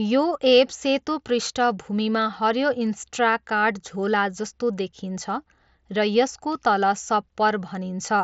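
Speech over a Bluetooth mSBC headset codec link, with nothing above about 7.7 kHz and only the light graininess that path carries, and no faults present.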